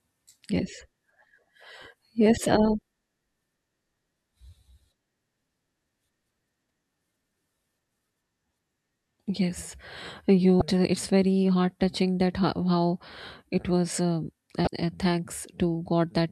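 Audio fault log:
2.79–2.81 s, 6.67–6.70 s, 10.59–10.62 s, 14.64–14.67 s: damaged data in a compressed stream. Each is a brief glitch cutting through the speech, 24 to 30 ms long. Corrupted bytes make the decoder misread a frame and lose sync until the next frame header. The events recur roughly every 4 seconds.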